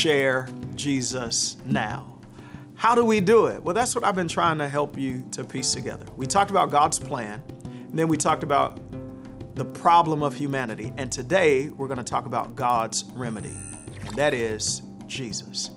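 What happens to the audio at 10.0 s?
At 10.0 s the resampler restarted on every block, as it does throughout. Each 100 ms block was converted separately, leaving edge errors. They tick at 10 Hz.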